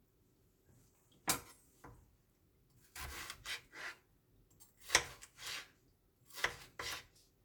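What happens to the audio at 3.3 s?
Nothing goes wrong at 3.3 s: the sound there plays through intact, with no dropout, click, glitch or other fault.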